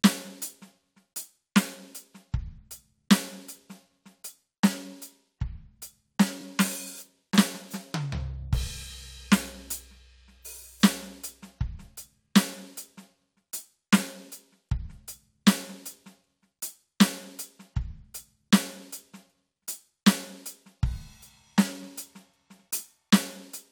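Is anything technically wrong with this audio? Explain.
Yes. Repeated frames from 6.40 to 6.42 s: a compressed block of about 23.2 ms plays twice, so the music briefly stutters and gains 23.2 ms, which fits a single duplicated frame.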